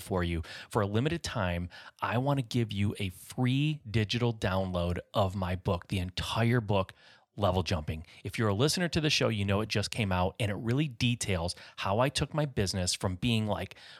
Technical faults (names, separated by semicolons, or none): none